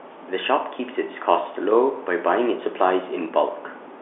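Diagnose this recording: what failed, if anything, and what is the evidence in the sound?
Nothing stood out on listening: the speech arrives as ordinary G.711 telephone coding, limited to the usual line band with nothing above about 3.8 kHz, and no stage shows a failure.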